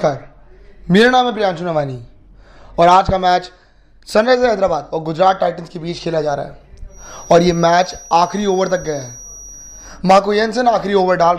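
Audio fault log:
6.86–10.03 s, feedback whistle: a thin, steady tone near 5.8 kHz sits about 25 dB below the sound, swelling and fading slowly in level. The likely cause is a loudspeaker-to-microphone loop held just at the edge of feedback, sustaining that single frequency without it running away.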